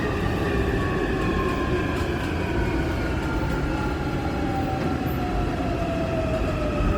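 A short recording of sounds, and the whole thing carries plainly audible Opus compression damage. Tonal parts come out noisy, rough and grainy rather than swirly, and the texture sounds filled in with synthetic hash where detail should be. The top end still reaches about 20.3 kHz, so this is likely the codec's full-band music mode starved of bits, which fits a rate of around 24 kbps.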